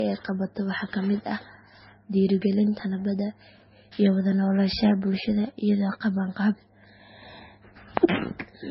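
Speech, damaged from start to finish. Nothing is heard above 5.6 kHz, so it sounds dull. Two distinct kinds of smeared, watery artefact overlap. The likely cause is transcoding between lossy codecs: a low-rate MP3 re-encoded to Vorbis, which kept the earlier cut-off and added its own damage.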